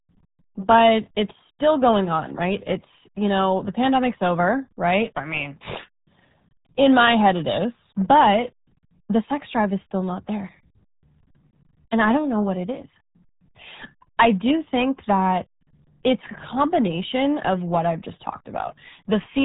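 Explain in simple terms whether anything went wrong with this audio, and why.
Something did go wrong, and it lasts the whole way through: the speech has been squeezed through the RealAudio 14.4 codec, an old format built for dial-up modems. It throws away everything above about 3.8 kHz, so the voice sounds muffled, like it's coming down a phone line. It also compresses very hard, which leaves the speech sounding gargly and smeared, as if heard through water.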